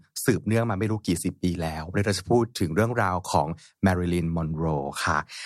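Nothing stood out on listening to this speech recording.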